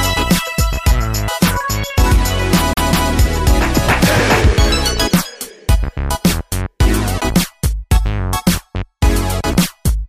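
From 2.73 to 3.12 s the audio sticks like a CD stuck on one turn, a 190 ms loop repeating twice with a short mute at each jump.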